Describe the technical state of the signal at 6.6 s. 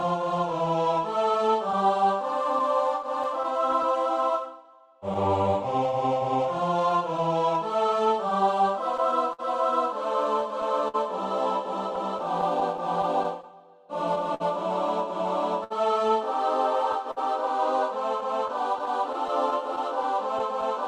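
At 6.6 s the signal carries clock drift between sender and receiver, present across the whole clip. The sender's clock runs roughly 5 percent slow relative to the receiver, so the jitter buffer steadily drains faster than it is refilled. The receiver can never settle into a fixed playout rate, and the mismatch shows up as recurring small timing hiccups at irregular intervals rather than as a single audible event.

The moment also falls inside the span of repeated timing corrections, running from 0.04 s to 13.68 s. To compensate for the slow sender, the receiver keeps repeating short pieces of audio, all in the same direction and unevenly spaced. The effective playback speed is 98 percent, and about a third of a second of material is added over the span. Each individual edit is small and is heard, if at all, as a slight stutter or a faintly unsteady tempo.

Layered on top are scattered short gaps between 5.14 s and 7.79 s. 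A handful of late or lost packets leave small holes in the stream, each patched by extending the preceding sound. The longest gap is around 10 ms, and the total concealed audio is around 50 ms, a very small share of the span. These gaps are heard as brief ticks or smears, while the sound stays largely clear between them.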